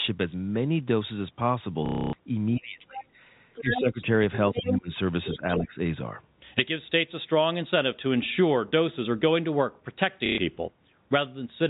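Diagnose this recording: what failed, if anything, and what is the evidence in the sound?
Network stage, packet loss with last packet repeated: at 1.86–2.13 s (270 ms) and 10.26–10.38 s (120 ms) the sound freezes into a robotic stutter. The buzz rate fits roughly 30 ms packets. Unlike a plain dropout, the gap is filled with looped sound rather than silence.

Call processing, speech suppressed in double talk: the near talker dips by about 10 to 20 dB at 2.55–3.05, 3.61–4.20, 4.54–4.91 and 5.34–5.78 s. This is likely an echo canceller ducking both voices. Unlike AGC pumping, the dips occur only while the far side is speaking.

Call processing, other side's voice leaking through: a second voice appears at 3.00–3.04 s (about 15 dB down), 3.54–4.02 s and 4.49–4.77 s (about 5 dB down), and 5.25–5.55 s (about 15 dB down). This is likely residual loudspeaker echo, not wiring crosstalk, because it overlaps the suppression dips.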